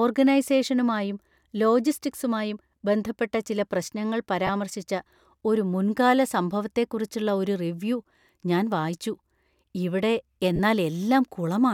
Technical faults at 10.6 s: lost LE Audio frames

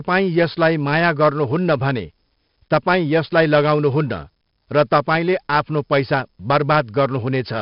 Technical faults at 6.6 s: 4-bit ADPCM compression

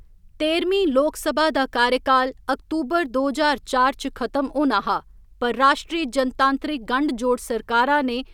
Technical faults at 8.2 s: none

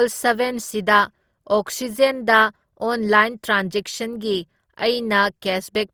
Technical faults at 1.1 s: generation loss

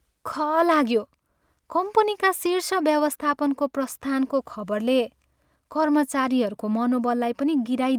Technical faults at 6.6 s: none

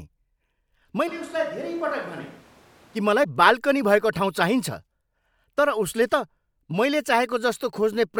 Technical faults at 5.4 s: none

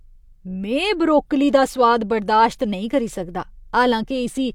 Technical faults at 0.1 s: none

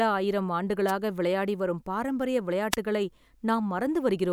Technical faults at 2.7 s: wireless microphone noise hit

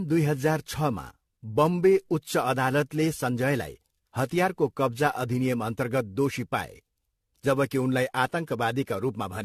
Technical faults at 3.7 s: generation loss

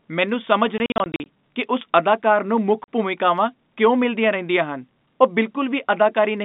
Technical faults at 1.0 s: packet loss filled with silence

